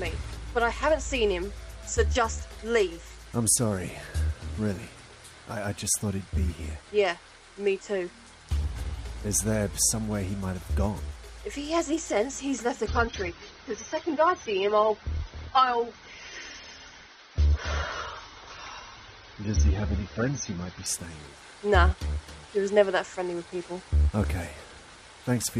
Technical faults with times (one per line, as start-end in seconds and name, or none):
12.86-20.86 adaptive stream at a lower bitrate